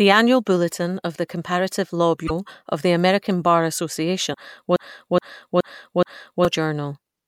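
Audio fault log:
Audio fault log:
2.26 s and 4.30 s, damaged data in a compressed stream: two brief glitches, each about 40 ms, the first just before "of the". Corrupted frames leave the decoder misreading data until it regains sync. On a spectrogram each is a short broadband vertical smear, with an abrupt step in the waveform.
4.76–6.45 s, broken-record loop: a 0.42 s fragment plays four times back to back, replacing the speech that belonged there. This likely comes from a stalled stream resending its last buffer. The spectrogram shows an identical block tiled repeatedly, and the waveform repeats exactly at each seam.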